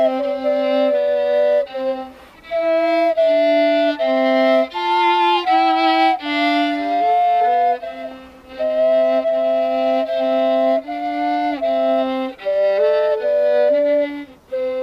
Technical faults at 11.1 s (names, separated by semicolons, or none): none